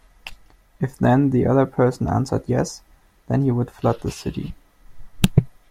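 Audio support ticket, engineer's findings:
No audible faults found in the speech recording; nothing to trace to any component.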